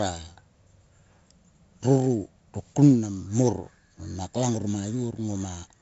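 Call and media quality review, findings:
4-bit ADPCM compression across the whole clip. Gritty hiss riding on every loud stretch of speech, pumping up and down with level, plus smeared, distorted attacks where the step size can't grow fast enough. Damage is heavy. Dull top end too: nothing above 7.7 kHz, which fits a 16 kHz sample rate at 64 kbps. Points at a low-rate ADPCM encode stage somewhere in the chain, not the mic.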